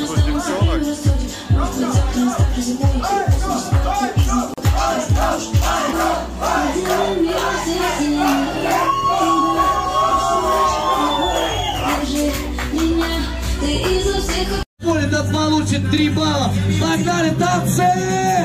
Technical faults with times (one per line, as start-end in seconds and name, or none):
4.54-4.58 gap at a join of encoded pieces